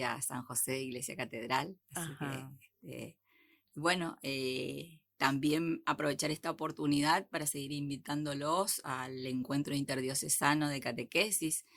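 No technical faults can be heard anywhere in the clip.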